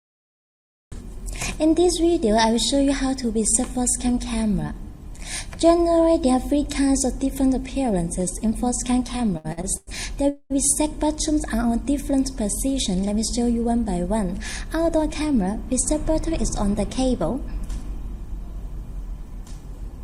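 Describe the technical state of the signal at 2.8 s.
The signal at 2.8 s is intact, with no fault audible at that moment.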